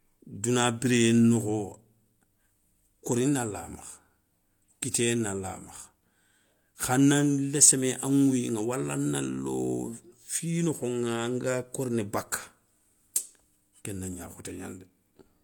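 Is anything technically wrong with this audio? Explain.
Yes. Throughout the speech this is low-bitrate audio saved at a high bitrate: the MP3 likely re-encodes a low-bitrate source, keeping its artefacts, and a spectrogram shows nothing above 18.5 kHz.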